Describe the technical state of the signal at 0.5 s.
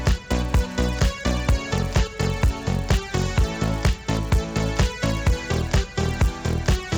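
At 0.5 s the signal carries a resampler restarted on every block, and the fault runs through the whole clip. Each 10 ms block is converted on its own, so at every edge the interpolator lacks the true neighbouring samples and leaves a small error. With blocks this short, those errors merge into a buzz at 100 Hz that sits on the sound wherever there is signal. The pattern fits an upsampling from 16 kHz to 48 kHz.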